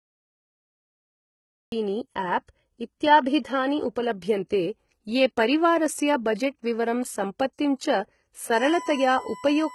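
From 0 to 1.72 s there is only silence, a flat line on the waveform, and then the speech cuts in abruptly at 1.72 s with no attack or fade. This is a cut-off start: the recording began late, mid-sound, so the first instant appears as a hard vertical edge.

Throughout the clip the treble is heavily damaged, with gritty, metallic s sounds and a lispy edge, likely from HE-AAC compression at a low bitrate, which fits about 16 kbps. On a spectrogram the upper bands look like copied, blocky versions of the lower ones, with harmonics that fail to line up across the crossover.

From 8.54 s to the end, a USB whine appears: a steady 1 kHz tone, about 15 dB below the speech, from USB bus current in 1 ms frames leaking through power or ground. On a spectrogram it shows as a sharp horizontal line at 1 kHz.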